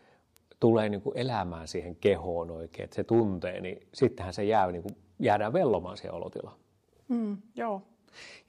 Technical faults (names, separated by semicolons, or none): bit error spike